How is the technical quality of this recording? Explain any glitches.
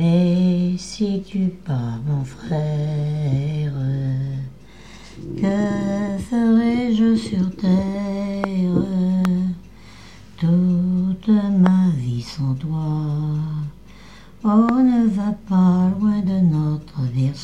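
Four loud pops disturb the recording, at 8.44–8.46 s, 9.25–9.27 s, 11.66–11.68 s and 14.69–14.71 s. Each is a single sharp pop of about 20 ms, peaking roughly 15 dB above the surrounding audio, which continues underneath. The likely cause is a sudden voltage pulse from a connector, switch, static or driver glitch. On a waveform each shows as a tall narrow spike; on a spectrogram, a thin vertical stripe across all frequencies.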